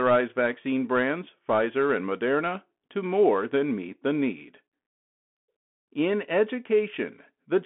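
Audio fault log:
Throughout: Bluetooth CVSD headset codec. The speech is confined to a narrow telephone band of roughly 200 Hz to 3.4 kHz, consistent with a 64 kbps CVSD link. Each sample is coded as a single up-or-down bit with an adaptive step, so loud high-frequency content outruns the step and distorts, s sounds come through scratchy, and a granular hiss sits under the speech. The coding damage is plainly audible.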